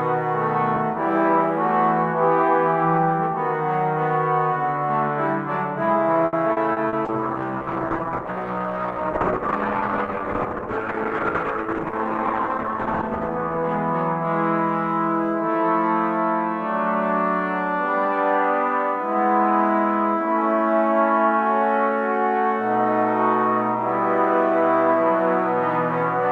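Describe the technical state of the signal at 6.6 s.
Repeated packet loss (robotic sound) runs from 6.26 to 6.96 s. Four gaps fall in quick succession, each patched by extending the preceding sound, with the longest gap about 70 ms. Roughly a quarter of the stretch is concealed, leaving choppy audio with missing pieces.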